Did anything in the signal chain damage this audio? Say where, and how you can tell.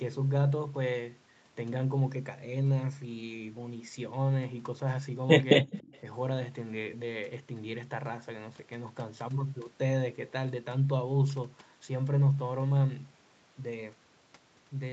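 Yes. At 5.62 to 5.67 s the speech drops by roughly 25 dB for about 50 ms, most likely speech suppressed in double talk by the call's echo canceller. The brief, deep gouge during overlap, rather than steady thinning, separates it from codec loss.

From 5.7 to 6.0 s a faint delayed copy of the speech, about 35 dB below it and trailing by 288 ms, points to a likely echo leak from a loudspeaker endpoint. The fixed delay distinguishes it from room reverberation, which decays continuously without a discrete lag.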